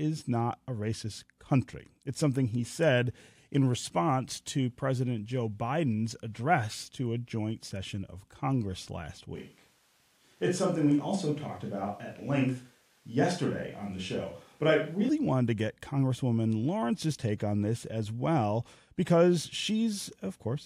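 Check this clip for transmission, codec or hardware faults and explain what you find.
One fault is present, a switch to a distant microphone, from 9.36 s to 15.09 s. The signal from the close microphone likely dropped out, leaving a pickup further from the talker to carry the speech. Right before "wanted to get", the speech turns suddenly roomy and hollow, with thinner bass, though the overall level barely changes. Room noise rises but stays well below the speech, around 40 dB down. The close sound returns just as abruptly.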